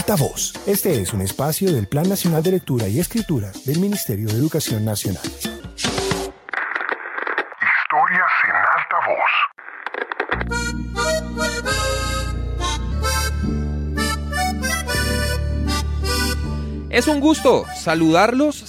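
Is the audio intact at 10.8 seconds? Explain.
No. From 5.6 to 12.92 s there is a section at the wrong speed, likely from being played back against a mismatched clock, running at 0.808 times normal speed. At 10.8 s the sound is slowed and sits roughly four semitones lower, deeper and draggier.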